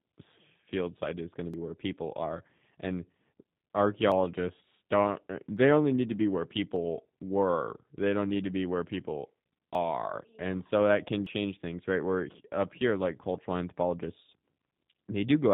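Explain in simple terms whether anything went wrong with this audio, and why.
Throughout, the speech passes through the G.729 codec, a phone-call compressor that rebuilds the voice from a simplified model and discards everything above about 4 kHz. It sounds muffled, rough and slightly synthetic.

Small jumps occur at 1.54 s (between "site is going to" and "where people are and"), 4.12, 5.57, 6.76, 9.75 and 11.26 s, each skipping a few hundredths of a second. This is likely a dropped buffer (overrun), where audio was overwritten before being collected.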